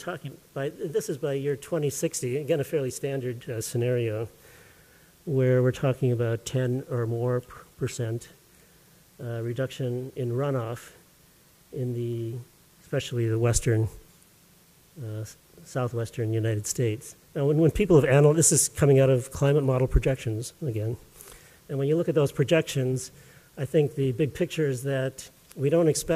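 No technical faults detected.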